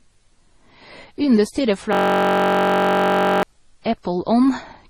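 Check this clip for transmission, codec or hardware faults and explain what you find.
Two faults are present: a layered codec sound across the whole speech clip, and a frozen-buffer loop in the middle.

Transcoding between lossy codecs, throughout: the speech was likely encoded with one lossy codec and then re-encoded with another. The combination fits a low-rate MP3 stage followed by Opus. Nothing is heard above 12 kHz, because the lowest cut-off in the chain survives every later stage. The second encoder also spent its limited bits reproducing the first encoder's artefacts, then added its own. Both sets of artefacts are audible together.

System hang loop, 1.93 to 3.43 s: the machine or its audio driver stalled, but the sound hardware kept replaying the same ring buffer. A 21.33 ms slice, which fits a 1024-sample buffer, repeats about 70 times. Because the loop is so short, the speech is replaced for about 1.5 s by a steady, mechanical buzz at 46.9 Hz. 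Normal audio resumes only when the system recovers.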